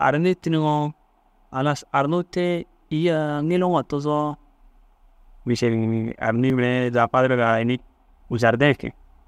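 At 6.5 s the speech skips ahead, losing about 10 ms, likely a dropped buffer (overrun) with samples overwritten before being read.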